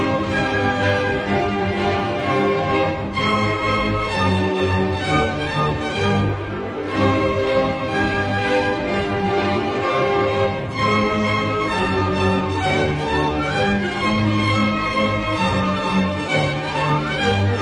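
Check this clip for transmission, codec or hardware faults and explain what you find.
There's one fault, and it runs the whole way through: a resampler restarted on every block. Throughout the clip you get a steady tick about ten times a second, riding on the audio and vanishing wherever there's no signal. The conversion, which fits a 44.1 kHz to 48 kHz change, was done on each 100 ms block in isolation, so every block edge lacks its true neighbouring samples and picks up a small error. That recurring edge glitch is the tick you hear.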